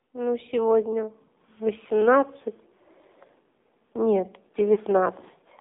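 AMR narrowband mobile codec throughout: the speech sits between 250 Hz and 3.7 kHz with a buzzy, synthetic edge, which fits a low 7.4 kbps mode.

Lost AMR speech frames at 4.74 to 4.79 s: the decoder covers the gap with a 20 ms dip or warble, which fits a single frame lost to radio errors.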